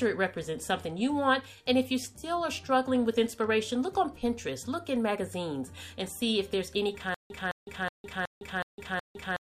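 From 7.14 s to the end, a stutter with silent gaps: one 213 ms fragment repeats six times, each followed by 157 ms of digital silence, a 370 ms cycle. A stalled stream replaying its last buffer is the likely cause. The waveform shows identical blocks between flat lines.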